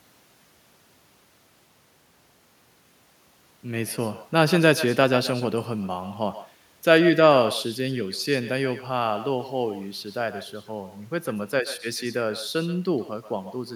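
Speech clip with echo and no canceller throughout. Each phrase returns about 15 dB quieter, roughly 150 ms later, sounding thin. A far-end loudspeaker feeds the microphone unchecked.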